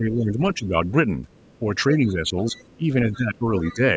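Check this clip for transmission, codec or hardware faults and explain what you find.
Two echo-canceller faults are present, overlapping in time, through most of the speech.

Speech suppressed in double talk affects 0.00 to 0.75 s and again 1.59 to 3.82 s. The talker's speech dips repeatedly, by up to about 10 dB. The likely cause is an echo canceller that could not separate near and far talkers, so it turned both down.

The other side's voice leaking through appears at 1.29 to 1.59 s, 2.53 to 2.76 s, 3.13 to 3.17 s and 3.57 to 3.75 s. These are faint scraps of a second voice. They grow from about 35 dB to about 20 dB below the speech. Likely the echo canceller left loudspeaker sound in the microphone signal. The call's microphone processing, with nothing above 8 kHz, plays no part in this.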